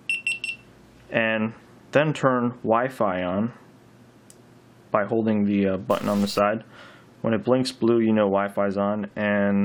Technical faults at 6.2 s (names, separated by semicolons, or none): stuck bit